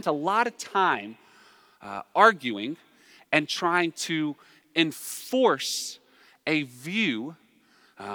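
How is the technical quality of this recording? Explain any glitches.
The speech recording has no audible technical glitches, so there is nothing to explain.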